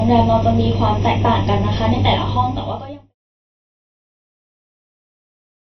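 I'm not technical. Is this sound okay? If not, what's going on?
No. Two problems run through the whole clip.

The first is channel delay (comb filtering). One side of the recording arrives a fraction of a millisecond late, and when both sides are mixed into one, some pitches cancel each other out. The gaps are evenly spaced, starting around 1.5 kHz, so the speech sounds hollow and slightly boxy, as if heard through a tube, from the first second to the last.

The second is a lossy compression fault whose grainy, smeared texture points to AAC compression as the likely cause. The sound has nothing above about 6 kHz, so it lacks crispness and the s and t sounds are blunted. The data reduction is heavy enough to hear, with a watery, fizzy quality over the speech.

The fade-out between about 2 s and 3.15 s is gradual, with no click at the end.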